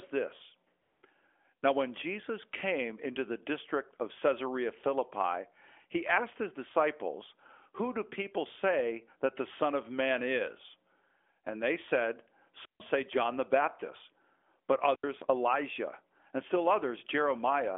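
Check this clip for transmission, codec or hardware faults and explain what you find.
Three faults are audible in this speech clip, which comes over a narrowband mobile link whose band stops near 3.4 kHz, consistent with AMR-NB at a high rate such as 12.2 kbps.

AMR comfort noise, 0.82 to 1.02 s, just before "now when": for 200 ms the phone sent no speech frames, and the receiver substituted synthetic noise. The real background gives way to a smooth, even hiss. On a spectrogram this shows as a flat, featureless band. The waveform has a uniform low envelope.

Wireless microphone squelch dropout, 12.62 to 12.81 s after "they said", and 14.89 to 15.08 s: the FM radio link faded and the receiver's squelch muted the output, for 150 ms and then 82 ms. Each is heard as a brief rise of static and then a gap of near silence. The waveform goes flat, and the spectrogram shows a blank vertical slot.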